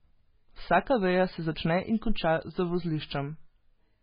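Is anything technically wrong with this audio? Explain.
Yes. Heavy MP3 compression is likely, throughout: nothing above 5 kHz, and weak spectral detail flickers frame to frame, giving watery, swirly speech that points to a very low bitrate.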